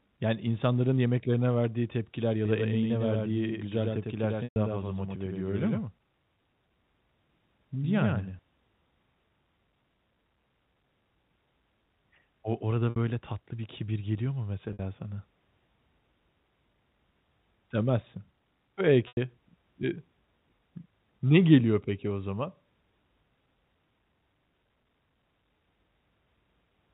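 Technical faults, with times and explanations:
2.45 s to 8.39 s, doubled audio track: a second full-band copy of the speech runs about a tenth of a second behind the first and about 5 dB quieter, producing a slapback doubling. The copy carries no reverberant tail or room colouring, and it cuts in and out abruptly at both ends, so it is not an acoustic echo. The likely cause is the same signal being picked up again through a slower path.
4.44 s, 12.90 s, 14.73 s and 19.08 s, packet loss with pitch repetition: the four gaps last 120, 60, 60 and 90 ms. The receiver filled each gap by repeating the last pitch cycle and fading it over roughly 50 ms. The 60 ms gaps sound like a briefly held, buzzy tone. The 120 ms gap, and to a lesser degree the 90 ms one, fade toward silence before the speech returns through a short cross-fade.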